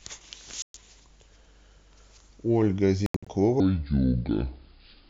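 At 0.62 s the speech cuts to silence for about 122 ms, until 0.75 s. This is a Bluetooth dropout, likely caused by audio packets that reached the headphones too late and were discarded. A second, broken-up dropout runs from 3.06 to 3.27 s, with about 163 ms lost in pieces across roughly 200 ms. Its longest gap is about 81 ms. Unlike a pause in playback, the speech does not pick up where it stopped. It resumes further along, so the missing stretch is simply skipped.

From 3.6 s to the end, the speech plays as a section at the wrong speed, slowed to 0.693 times normal. The likely cause is playback against a mismatched clock. Pitch falls by roughly seven semitones, and the speech drags at the same time. That coupling of lower pitch and slower tempo sets it apart from a plain pitch shift, where the timing would stay intact.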